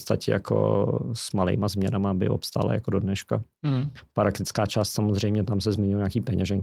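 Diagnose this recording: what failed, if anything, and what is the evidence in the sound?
Nothing failed, and the sound of this speech recording gives no evidence of a fault at any stage.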